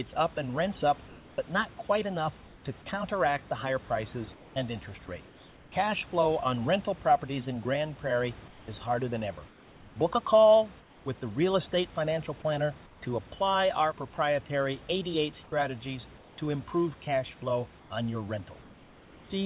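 Comfort noise in place of the background occurs at 2.46–2.64, 4.34–4.56, 8.48–8.68, 9.48–9.96 (after "is harder than ever"), 10.8–11.06, 12.86–13.02 (before "to apply our proprietary"), 15.44–16.38 and 18.62–19.3 s (after "cash flow on your"). The real room noise drops out and is replaced by a flat, featureless hiss about 2 to 5 dB quieter. The likely cause is discontinuous transmission on the call link, where the receiver generates filler noise during pauses.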